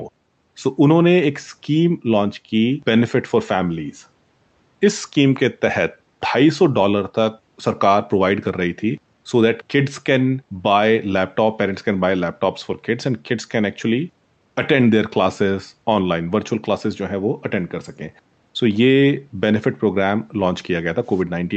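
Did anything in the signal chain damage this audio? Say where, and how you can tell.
No, the speech carries no damage from the chain, and its spectrum stopping around 8 kHz is what an Opus call path at a modest bitrate produces, not a fault.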